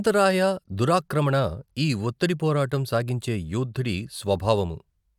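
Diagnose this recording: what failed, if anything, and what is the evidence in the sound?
Nothing in the recording points to a failure at any stage: the speech signal stays continuous and steady throughout, with no dropouts, discontinuities or distortion to trace back to the wiring, the converter, the buffering, the network or playback.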